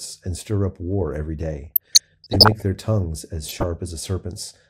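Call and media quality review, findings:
DAB burbling, 1.64–2.62 s, after "stir up war every", before "their tongues as": noise blips and sub-band level jumps over speech. Weak-reception bit errors slip past error correction into MP2 data, so corrupt scale factors make single sub-bands jump per frame. Spectrogram: blocky band patches flickering frame to frame.

DAB burbling, 3.47–3.67 s, after "their tongues as": shorter burst, same mechanism in the DAB receiver chain. Waveform: uneven envelope bumps; spectrogram: isolated rectangular sub-band flashes.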